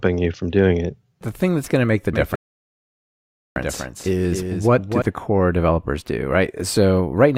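A speech clip with two overlapping faults. From 2.13 to 5.02 s a doubled audio track runs: a second, full-band copy trails roughly 300 ms behind at about 5 dB lower, switching on and off abruptly with no decay or room colour, which rules out echo or reverberation; a slower second capture path is the likely cause. Inside that span, from 2.35 to 3.56 s, a rebuffering stall cuts the sound to silence for 1.21 s while playback waits for data. It then resumes exactly where it stopped, so unlike a dropout nothing is missing and only time is added.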